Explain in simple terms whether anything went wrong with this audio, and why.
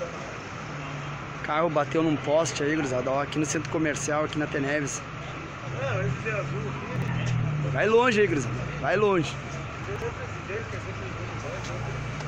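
Something did go wrong, twice: chunks out of order. At 6.96 to 7.08 s, a 60 ms slice of sound plays one slot late, swapped with the slice after it. At 9.84 to 10.02 s, another 60 ms slice plays two slots late. Each spot sounds like a brief jumble. Unlike a dropout, no sound goes missing, and unlike a stutter, nothing repeats. The same pieces are simply played in the wrong order.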